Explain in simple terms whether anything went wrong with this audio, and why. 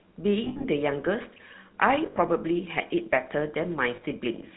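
Yes, two things went wrong. First, the whole recording passed through the GSM full-rate codec, the original mobile phone speech coder. It squeezes speech by modelling the shape of the throat and mouth and driving that model with a sparse train of pulses, and it throws away everything above 4 kHz. Throughout the clip, speech sounds muffled and phone-like, with a clearly audible buzzy, gravelly roughness.

Second, there are lost GSM frames, where chunks of the coded signal never arrived. The decoder fills each gap by reusing the settings of the last good piece of speech, so the voice briefly turns into a rough, metallic ringing. This happens from 0.44 to 0.65 s, where about 140 ms goes missing in scattered bits (the longest single gap roughly 70 ms), then from 2.06 to 2.17 s and from 3.96 to 4.03 s.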